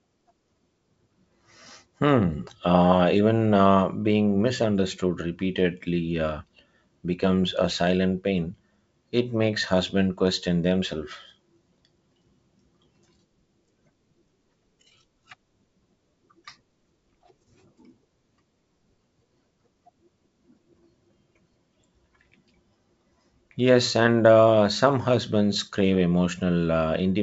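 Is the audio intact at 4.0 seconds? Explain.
Yes, the speech at 4.0 seconds is intact, carried through G.722 wideband telephone coding at 64 kbit/s, with nothing above about 7.7 kHz.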